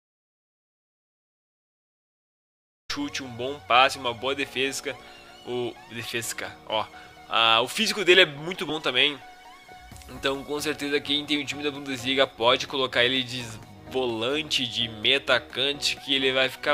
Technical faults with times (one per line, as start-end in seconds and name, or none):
0.00-2.89 audio dropout to silence
8.69-8.72 compressed frames skipped
10.17 compressed frames skipped